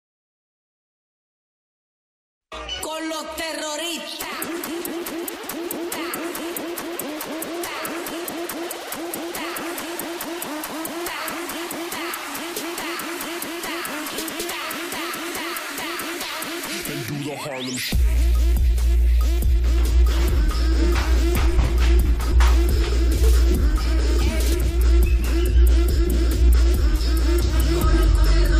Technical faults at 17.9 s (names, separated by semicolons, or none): none